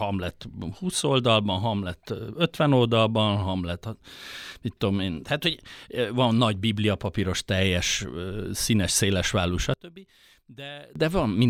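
After "papíros teljes színes szélesválú", from 9.74 to 10.96 s, the speech drops by about 21 dB to a faint remnant. The likely cause is one channel inverted, cancelling when summed to mono; the waveform shrinks abruptly and the spectrogram dims across all bands.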